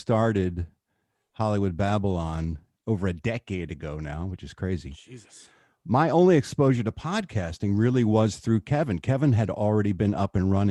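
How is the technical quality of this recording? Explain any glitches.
The recording has no technical glitches to report. Nothing in the audio stands out as a fault that needs explaining.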